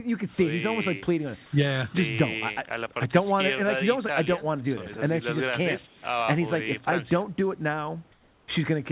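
From 5.87 to 6.02 s and again from 8.12 to 8.48 s, the background turns into a flat, featureless hiss about 3 to 4 dB quieter, likely comfort noise in place of the background filling transmission pauses. Unlike a dropout, the noise never falls to silence.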